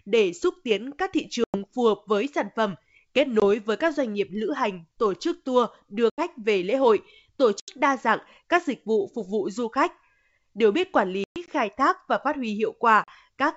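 Speech over a wideband G.722 line, with packet loss on an ADPCM call punching hard silent holes at 1.44–1.60 s (between "xúc tiến các thị" and "phù hợp với sản"), 3.40–3.43 s (just before "với các doanh nghiệp"), 6.10–6.22 s, 7.60–7.80 s (after "về lễ hội tổ"), 11.24–11.49 s (scattered gaps, the longest 120 ms) and 13.04–13.10 s. The decoder's predictor and step size lose track of the sender, so each return comes back slightly distorted briefly before settling.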